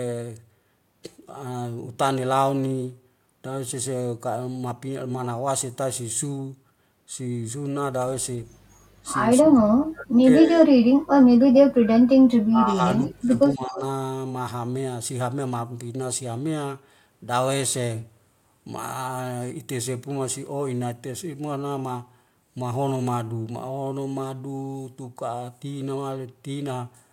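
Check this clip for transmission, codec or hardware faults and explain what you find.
The clip has two kinds of fault, both pointing to echo cancellation during simultaneous talk.

Speech suppressed in double talk occurs from 9.39 to 11.97 s, 12.42 to 13.32 s and 13.54 to 13.82 s. The voice dips and breaks up in pieces, by about 40 dB at worst in the first stretch, about 30 dB in the second and about 15 dB in the third. The likely cause is an echo canceller that could not tell local speech from loudspeaker echo while both sides talked, and so attenuated everything.

An echo leak appears at 13.07 to 13.13 s as a brief, faint delayed copy of the voice, about 25 dB below the speech and trailing it by 248 ms. This is likely residual loudspeaker pickup that the far end's canceller failed to remove and sent back down the line.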